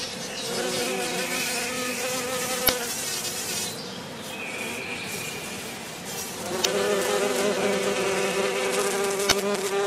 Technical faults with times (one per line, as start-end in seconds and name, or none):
2.65-2.69 damaged data in a compressed stream
6.61-6.65 damaged data in a compressed stream
9.28-9.32 damaged data in a compressed stream